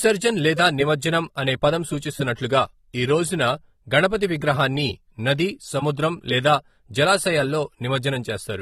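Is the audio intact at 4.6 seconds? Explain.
No. At 4.6 seconds the speech carries the same damage that runs through the whole clip: the top end is missing, with nothing above 13.8 kHz, and sibilants and sustained sounds take on a smeared, warbling, fizzy texture. The likely cause is AAC compression at a low bitrate, consistent with roughly 32 kbps. To fit that budget, the encoder lowers its cut-off and quantises each frame's spectrum coarsely, leaving holes that come through as a dull, swirling character.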